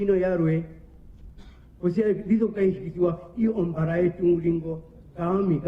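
At 2.54 s the sound suddenly gets more processed, with no gap at all. That's an adaptive stream at a lower bitrate: the connection slowed and playback switched to a much leaner Opus version, roughly 64 down to 16 kbit/s by ear. Smearing artefacts persist to the end.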